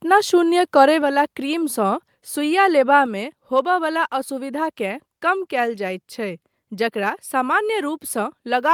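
At 1.02 s and again at 3.06 s, the whole speech signal, background included, drops abruptly by about 4 dB and stays lower. This is a microphone volume stepped down, likely the call software cutting the device's input gain in one step.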